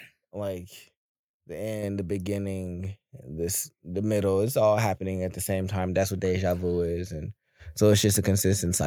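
At 1.83 s the microphone volume is stepped up by about 5 dB. The input gain jumps at once, so speech and background both get louder together.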